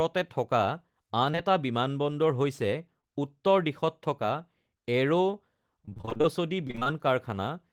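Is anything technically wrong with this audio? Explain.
Yes, the speech has packet-loss faults.

Short concealed packet loss occurs at 1.31 to 1.35 s, again immediately after at 1.35 to 1.39 s, and at 3.01 to 3.05 s. Each time about 20 ms of audio failed to arrive, so the receiver extended the preceding sound and blended back. This is heard as a brief smear or wobble.

Repeated packet loss (robotic sound) runs from 5.85 to 6.26 s and from 6.68 to 6.88 s. Roughly half of each stretch is patched guesswork, with holes up to about 25 ms. The sound suggests around ten and five dropouts in turn, giving a choppy texture.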